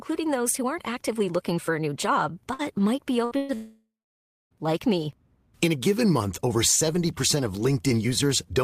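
Bursts of packet loss at 2.53 to 2.62 s, 3.25 to 3.34 s and 3.37 to 3.52 s leave the receiver extending the last sound, so fading buzz or hiss replaces 60, 60 and 120 ms of speech. A long network dropout is the likely cause from 3.55 s: concealment fades into about 0.62 s of silence, and speech resumes at 4.54 s with nearly a second missing.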